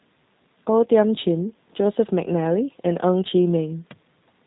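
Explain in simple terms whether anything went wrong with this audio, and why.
Something did go wrong. From start to finish, this speech has passed through a G.729 codec, a low-data phone-call system that doesn't send the sound itself. It sends a rough description of how the voice is shaped and pitched, then rebuilds it at the other end. Nothing above about 3.9 kHz survives, so the voice sounds muffled and boxed-in, and the rebuilding leaves a clearly audible rough, slightly artificial edge.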